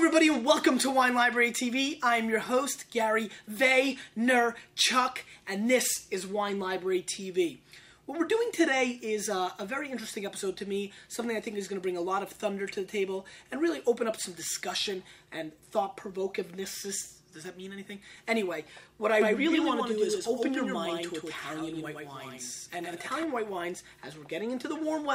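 A second, slower capture path or a misaligned edit likely fed the same signal into the mix twice, producing a doubled audio track from 19.21 s to 23.23 s. A full-band copy trails the original by around a tenth of a second at roughly 5 dB lower, with no decay or room colour of its own, so the sound gains a hard, slapback-like double. The copy cuts in and out abruptly at both ends of that span.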